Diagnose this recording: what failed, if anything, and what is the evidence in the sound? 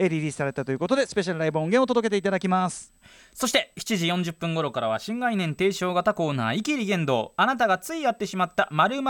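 USB whine runs through the whole speech recording, a fixed 8 kHz tone sitting roughly 40 dB below the speech. The fault is in the analogue wiring: 125-microsecond microframe current draw on the USB bus leaks through shared power or ground. A spectrogram shows one unbroken horizontal line at 8 kHz.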